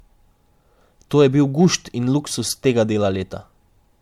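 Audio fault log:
throughout: generation loss. The speech sounds swirly, hollow and smeared, with blurred attacks. It was likely decoded and re-encoded as MP3 about four times, at what sounds like 96 kbit/s. Each pass requantised on a shifted frame grid, stacking noise and spectral holes. Nothing is heard above 19.9 kHz.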